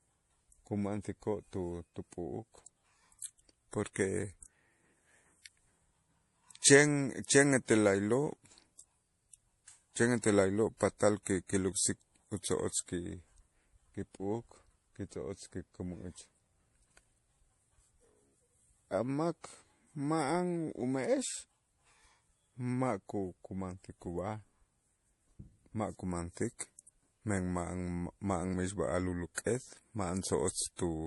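A speech recording with one fault running through all of it: transcoding between lossy codecs. Nothing sounds above 11.5 kHz, so the top end is dull. Two layers of artefacts sit together. There is a swirly, metallic haze, plus a grainy, smeared roughness. The likely cause is a low-rate HE-AAC encode, around 40 kbit/s, re-encoded to MP3 at about 48 kbit/s. The MP3 stage spent its bits on the earlier damage and added its own.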